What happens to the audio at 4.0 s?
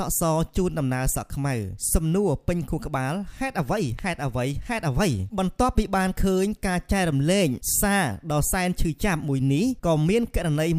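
A single loud pop lands at 3.99 to 4.01 s, a sharp click-like burst lasting about 20 ms and peaking a few decibels above the surrounding signal, while the sound continues unbroken beneath it. Its likely cause is a sudden voltage step or pulse, such as from a switch, static discharge or a driver glitch, entering the chain and being smoothed by the following circuitry. On a waveform it appears as one narrow spike standing clear of the envelope; on a spectrogram, as a thin vertical stripe spanning the full frequency range.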